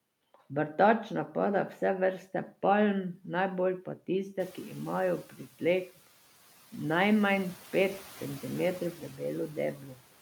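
Noise suppressor catching up, from 4.39 to 4.69 s just after "vrste palm najbolj pa", in this speech clip. The room noise jumps by about 17 dB around 4.5 s, and the suppressor's noise estimate is still tuned to the quieter background. For roughly 300 ms the louder noise comes through with only about 4 dB of reduction before the estimate adapts and the noise sinks to about 22 dB below the speech. Speech cut by the noise suppressor occurs from 9.76 to 9.9 s. The suppressor mistakes a soft stretch of speech for background and pulls it down by as much as about 7 dB over roughly 150 ms. The affected speech sounds swallowed and faint.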